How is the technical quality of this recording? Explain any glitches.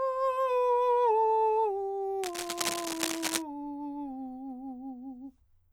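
The recording has one clear fault, a burst of cable scratch noise between 2.23 and 3.42 s. The likely cause is a worn cable, connector or control being moved, so that its contact resistance jumps about rapidly and injects irregular electrical noise into the signal path. For just over a second, a dense, uneven scratching and rustling sits on top of the music, only slightly quieter than the music itself, before the sound clears again.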